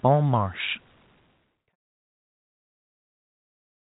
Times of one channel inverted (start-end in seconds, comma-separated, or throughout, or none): none